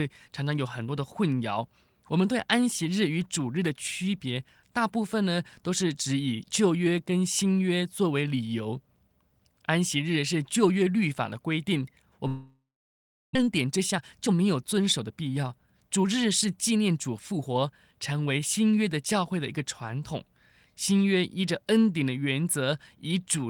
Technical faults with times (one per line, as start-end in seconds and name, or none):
12.27-13.37 long network dropout
13.38-17.92 jitter buffer speed-up